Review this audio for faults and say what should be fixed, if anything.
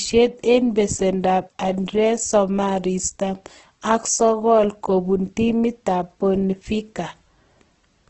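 Throughout, the speech sounds grainy and rough and stops at 8.1 kHz, likely Opus compression filling starved bands with noise at a rate near 12 kbps. Give the encoder a much higher bitrate next time.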